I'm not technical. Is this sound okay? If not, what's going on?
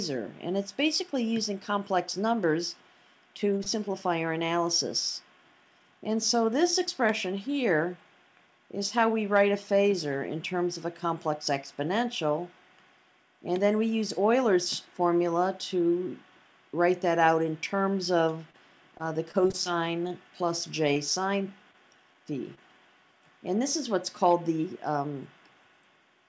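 No. There are scattered short gaps from 3.58 to 4.50 s (about three) and from 18.18 to 22.59 s (about ten). The receiver covered each tiny gap by stretching the last bit of sound. The audio also passed through a call codec that removes everything above 8 kHz.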